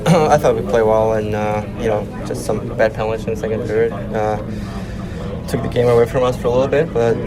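At 4.46 s a call bitrate drop sets in and lasts to 7.19 s. The bandwidth estimate fell, so the encoder coded more coarsely. The sound turns rough and muffled, with highs cut, which fits a fall from about 64 to 18 kbps.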